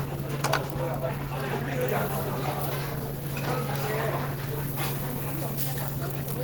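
Throughout the clip, the audio sounds hoarse and muffled, with a rough, grainy texture on sustained content. This is likely Opus compression at around 16 kbps in hybrid mode, where the low band is speech-coded and higher bands are filled approximately, leaving plainly audible codec damage.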